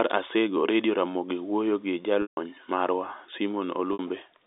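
Telephone speech, band-limited to about 250 Hz to 3.7 kHz, with packet loss with pitch repetition at 2.22–2.37 s, just after "owuoyo gi", and at 3.93–3.99 s. Unlike a plain dropout, each gap begins with a held, buzzy repeat of the last pitch period. The longer 150 ms gap then fades to silence before a brief cross-fade.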